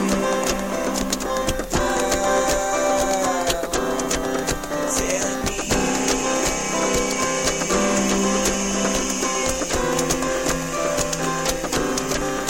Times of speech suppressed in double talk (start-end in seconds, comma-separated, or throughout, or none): none